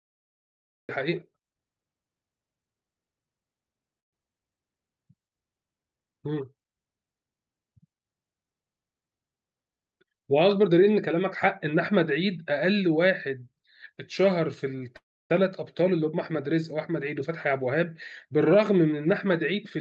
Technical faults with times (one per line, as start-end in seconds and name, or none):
0.00-0.89 cut-off start
3.99-4.23 call audio freeze
14.96-15.31 call audio freeze
17.20-19.77 jitter buffer speed-up